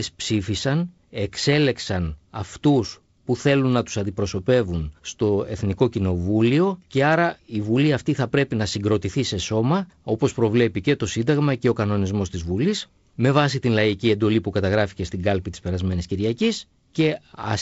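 Nothing here counts as a fault; the speech simply carries the usual signs of G.722 wideband telephone coding, with the top end stopping at about 7.7 kHz and the faint upper-band hiss you'd expect from that codec.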